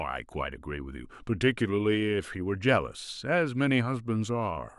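No technical faults can be heard anywhere in this speech recording. Nothing in the audio stands out as a fault at any point.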